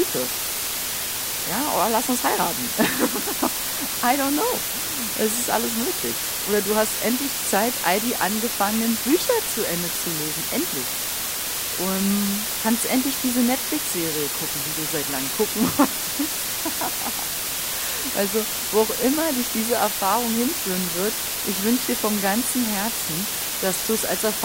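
Low bit depth with dither runs through the whole clip: the speech is held at only 4 bits, with dither added before rounding, so the coarse quantisation error becomes a constant, even white hiss roughly as loud as the speech itself, with no crunchy distortion.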